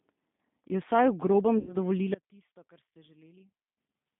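It's a speech clip, and the whole thing has gone through the G.729 codec at 8 kbit/s. You can plainly hear it: the band is squeezed to roughly 150 Hz to 3.6 kHz, and the voice comes out a bit rough and synthetic because the decoder rebuilds it from a vocal tract filter and a few pulses per frame. Around 1.59 to 1.76 s there's VoIP packet loss concealed by the speech codec. About 80 ms of audio went missing, which fits four 20 ms packets, and the decoder papered over it by stretching its last pitch and filter into a fading buzzy tone or coloured noise before things settle again. Then from 2.14 to 3.77 s the level drops by about 22 dB and the voice turns faint. That's likely one channel inverted, so the centred voice cancels when the stereo gets folded down to mono.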